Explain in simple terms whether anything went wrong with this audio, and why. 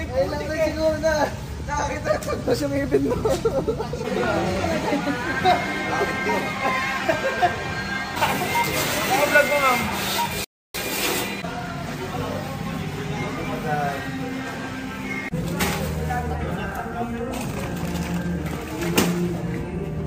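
At about 10.44 s the audio cuts to silence for roughly 0.3 seconds, then picks back up at 10.74 s. That's a playback stall, where the player most likely ran dry of data or got held up and just went quiet until it caught up.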